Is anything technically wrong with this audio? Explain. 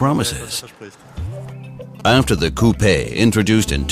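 Yes. Two kinds of mobile phone interference are present.

From 2.00 to 3.43 s there are GSM signalling bursts. A nearby 2G phone is exchanging short groups of radio bursts with the network, and the audio circuit rectifies them. They come through as a galloping dit-dit-dit of brief 217 Hz buzzes, around 20 dB below the signal.

From 3.58 s to the end there is GSM phone buzz. The phone is now in a call, transmitting continuously in bursts 217 times a second, and the circuit rectifies them. The result is a hard, raspy 217 Hz buzz with many harmonics, about 23 dB below the signal.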